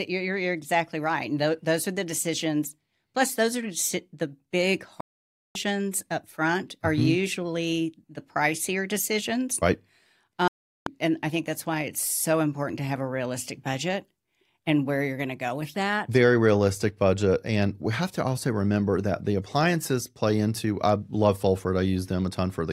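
The receiver twice stopped getting decodable frames and muted until clean ones arrived, a digital broadcast dropout. At 5.01 s, right after "those are the big", the speech drops to silence for about 0.55 s and resumes at 5.56 s with "up front are". At 10.48 s a second hole of about 0.39 s ends at 10.87 s on "and I think that's". Both gaps fit whole 32 ms frames being lost, and anything sent during them is simply gone.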